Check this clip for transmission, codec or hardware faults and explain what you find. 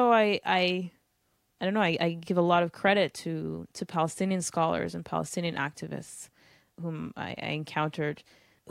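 No faults found in this speech recording; nothing to report.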